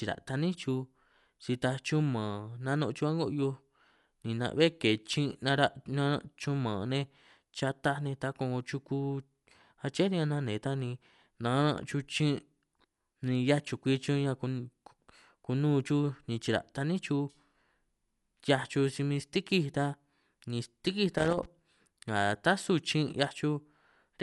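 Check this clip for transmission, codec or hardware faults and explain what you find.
Two faults are present in this speech recording: codec damage across the whole clip and a short burst of connector crackle near the end.

Throughout, the speech sounds dull and is topped by a rough, fluttering noise around voiced sounds. This is most likely Dolby Digital compression at a low rate, one that fits something near 64 kbps. Starved of bits, the encoder drops the upper band entirely and gives many frequency lines no mantissa detail. The decoder then fills those gaps with dither noise, which produces the grainy shimmer. On a spectrogram, energy stops at a hard ceiling of 11.4 kHz, and below it the harmonics look speckled and patchy rather than as smooth lines.

From 21.18 to 21.45 s, just after "ni stîkij", there is an irregular burst of scratchy crackle lasting about a quarter of a second. This is loose connector crackle. 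A worn or dirty contact kept making and breaking, chopping the signal on and off in quick succession, and any DC offset on the line turned each break into a small pop. On the waveform it appears as a cluster of sharp spikes and sudden dropouts. On the spectrogram it shows as a dense run of thin vertical broadband streaks.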